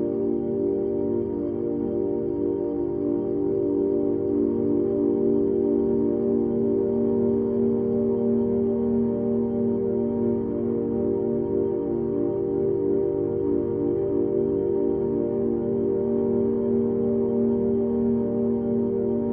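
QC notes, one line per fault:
8.27 s to end: adaptive stream at a lower bitrate. The treble abruptly turns thin and synthetic, with more codec artefacts, and there is no gap. The player likely stepped down to a much lower-bitrate rendition, which fits HE-AAC rebuilding highs by spectral band replication.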